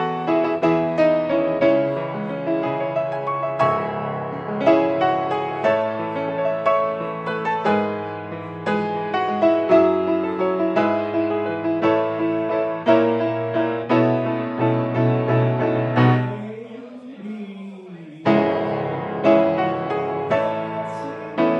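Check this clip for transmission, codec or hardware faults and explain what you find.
Nothing audible here points to a transmission, codec or hardware problem at any point in the audio.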